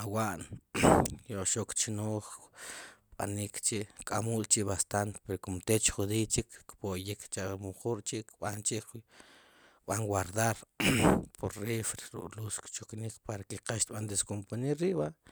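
Speech, with no audible faults.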